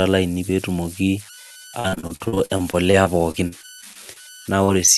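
Converter idle tones run through the whole clip: an undithered delta-sigma converter settles into repeating bit patterns, leaving tones around 1.5 kHz, about 20 dB below the speech.

Repeated packet loss (robotic sound) spans 1.79 to 4.18 s. Audio kept arriving late or not at all, and each hole, the longest 48 ms, was patched by extending the previous sound. About a quarter of the stretch is filled this way, giving choppy speech.

Short concealed packet loss occurs at 4.64 to 4.70 s and again at 4.86 to 4.89 s. The receiver bridged each missing 40 ms and 20 ms by continuing the last sound, heard as a brief smear or wobble.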